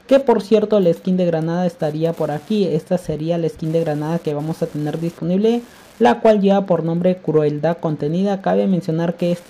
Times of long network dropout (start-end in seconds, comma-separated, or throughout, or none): none